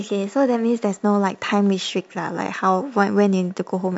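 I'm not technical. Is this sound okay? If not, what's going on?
Yes, I hear no technical problems in this recording.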